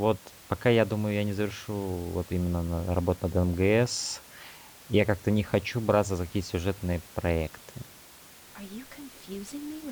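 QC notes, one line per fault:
No faults were found in the clip. Room noise in the background sits about 23 dB below the speech and belongs to the recording itself.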